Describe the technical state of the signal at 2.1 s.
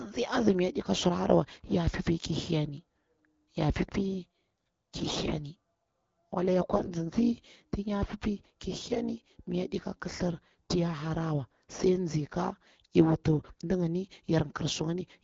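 At 2.1 s the speech comes through intact, with no fault at that moment, carried by AMR wideband (HD Voice) coding at 12.65 kbit/s, a rate at which that codec keeps speech clear.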